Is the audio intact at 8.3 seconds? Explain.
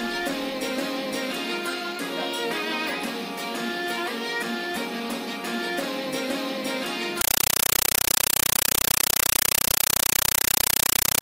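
No. From 7.21 to 11.21 s the sound gives way to loud, chattering static, 8 ms noise bursts repeating 31.25 times a second. It's a compressed stream played as audio: an AC-3 (Dolby Digital) bitstream taken as ordinary samples instead of being decoded.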